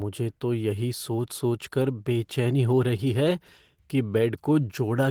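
A speech clip with clock drift between sender and receiver. The sender's clock runs about 2% slow, so the receiver's buffer keeps draining. Repeated timing corrections run from 0.40 to 4.97 s. The receiver repeats short pieces to stay in step, adding roughly a tenth of a second. Each correction is small.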